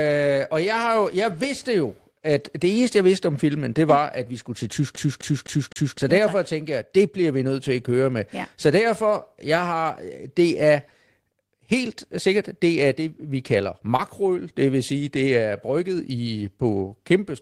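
From 4.96 to 5.98 s, after "at vi skulle til", the audio gets a CD stuck on one turn: a 256 ms slice repeats four times with a brief mute at each jump, the quick, regular stutter of a laser thrown back one track, before "ja derfor tak tænker" resumes.

At 13.96 to 14.01 s, just after "er det vi kalder", there is a short concealed packet loss. About 20 ms of audio never arrived, and the receiver extended the preceding sound for roughly 23 ms before blending back in, heard as a brief smear or wobble.

Within that same stretch, 13.99 to 14.01 s, a lost packet rebuilt from error correction fills a 20 ms frame, which points to one packet recovered from the low-bitrate copy carried in the next. There is no gap, but that frame sounds rougher and noisier than its surroundings.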